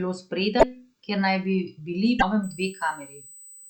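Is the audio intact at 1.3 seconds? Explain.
Yes, the audio is intact at 1.3 seconds, with no fault at that moment.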